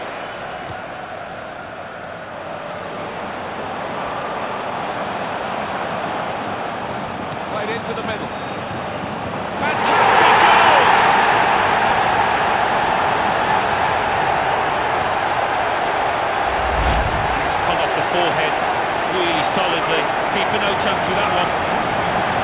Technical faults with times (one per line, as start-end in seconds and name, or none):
3.76-3.78 skip ahead